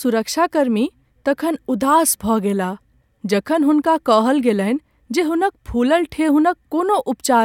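Nothing technical to flag in this bit of speech: no fault turns up anywhere in it.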